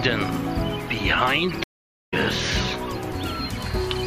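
A stream reconnect runs from 1.64 to 2.14 s. The connection dropped, leaving about 485 ms of silence, and the player reconnected with a fresh decoder. The sound resumes roughly 0.4 s further on, so that stretch of audio is skipped outright.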